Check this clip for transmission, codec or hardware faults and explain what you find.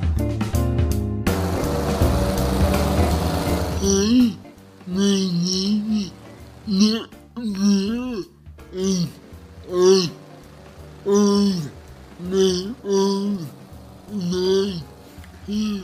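No transmission, codec or hardware faults turn up in this clip.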